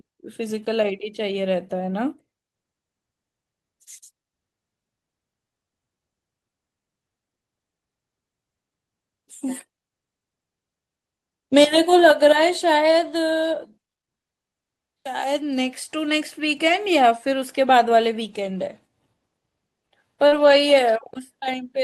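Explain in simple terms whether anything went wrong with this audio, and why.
Two things went wrong near the end of this speech. At 20.27 to 20.34 s there is short concealed packet loss. About 40 ms never arrived, so the receiver stretched the previous sound, causing a brief smear. Right after, from 20.32 to 20.54 s, we hear a lost packet rebuilt from error correction. Backup copies filled about 120 ms without a gap, but that stretch sounds rougher and noisier.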